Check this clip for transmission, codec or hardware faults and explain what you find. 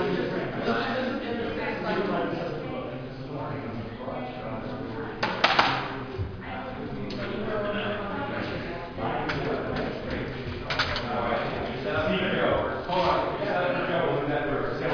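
No faults turn up anywhere in this clip.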